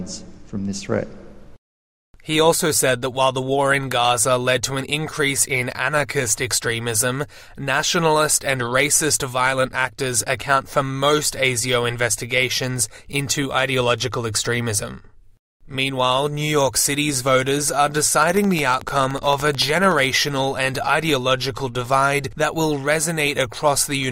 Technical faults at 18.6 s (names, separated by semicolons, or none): train of clicks